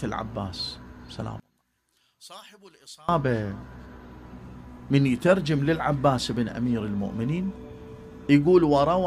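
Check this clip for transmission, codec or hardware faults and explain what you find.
One fault stands out. From 1.40 to 3.09 s the sound drops by about 28 dB to a faint remnant. That's likely one channel inverted, so everything shared between left and right cancels when summed to mono.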